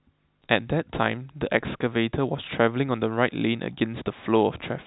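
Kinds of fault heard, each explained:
No faults found in this speech; the telephone-band coding leaves its usual 4 kHz upper limit and no damage beyond it.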